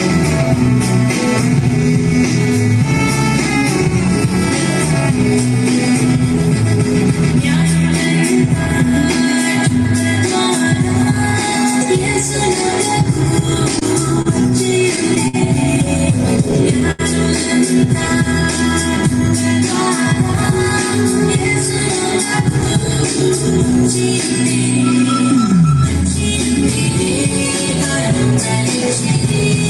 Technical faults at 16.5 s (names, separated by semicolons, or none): repeated stalls (stutter)